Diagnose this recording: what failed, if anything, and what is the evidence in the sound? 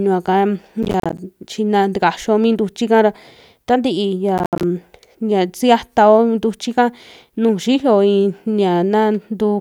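Driver or buffer stage: processor overload crackle at 0.83–1.18 s and 4.38–4.63 s, dense hard-edged silent gaps of about 10 ms each, not isolated dropouts or level clipping.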